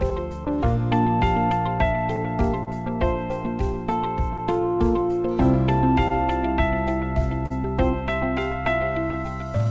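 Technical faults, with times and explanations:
Throughout: clock drift between sender and receiver. The timing feels faintly unsteady across the whole clip, with small hiccups at uneven intervals rather than on a regular beat. The sender's audio clock runs slow, roughly 2 percent behind the receiver's. The receiver keeps consuming audio slightly faster than it arrives, so its jitter buffer keeps draining. It has to stretch the sound, which produces these recurring, irregular timing blips.
0.10 to 9.15 s: scattered short gaps. Brief ticks and smears appear here and there over most of the clip, about ten in all. None lasts long, the longest being around 40 ms, and together they cover only about 2 percent of that stretch, roughly 150 ms. Each marks a packet that arrived too late or not at all. The receiver filled each hole by extending the preceding sound, so the audio stays clear between the small disturbances.
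0.57 to 9.7 s: repeated timing corrections. From just after the start to the end, the pace feels very slightly slowed and uneven. The receiver repeatedly inserts short stretches of duplicated audio to keep pace with the slower sender. It plays at about 99 percent speed and adds roughly 100 ms in total. The insertions all lengthen the sound and are unevenly spaced. The audio travels over a G.722 call path with nothing above 8 kHz, and each insertion is small.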